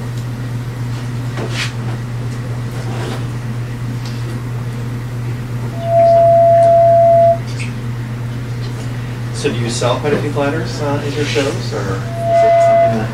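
Loudspeaker feedback squeal appears from 5.72 to 7.42 s and again from 12.0 s to the end. A microphone is hearing its own loudspeaker, and at 676 Hz the loop gain passes unity. That tone swells within a fraction of a second into a steady squeal, roughly 10 dB above the sound.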